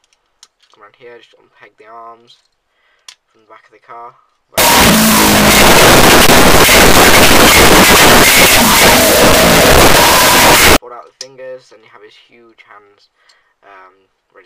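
From 4.58 to 10.76 s, a wrong sample width: 16-bit data read as unsigned 8-bit gives loud broadband noise over a half-speed, octave-lowered signal, filling the spectrogram and waveform.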